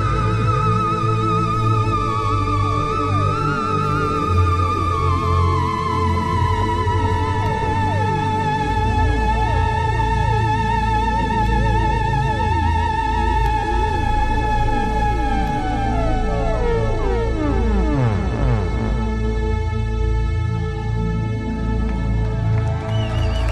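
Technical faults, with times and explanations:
7.46 to 15.48 s, periodic USB or driver dropouts: a regular run of about five ticks spaced 2.0 s apart. Each is a very brief gap, only a tiny fraction of a millisecond, where the audio stream was interrupted and the missing samples were replaced with silence. The sudden drop to silence and back makes a click, and the strict 2 s spacing points to a recurring background task stalling the USB bus or audio driver.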